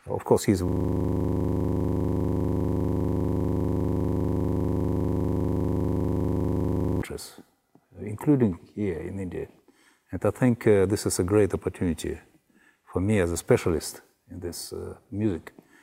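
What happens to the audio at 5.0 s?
At 5.0 s the system is stuck in a system hang loop that runs from 0.69 to 7.02 s. The computer or its audio driver has frozen, but the sound hardware keeps replaying the last block left in its ring buffer, a 40 ms slice that fits a buffer of that length. That slice repeats exactly, well over a hundred times, at 25 per second, so the audio becomes a steady, rapid stutter close to a rough buzz.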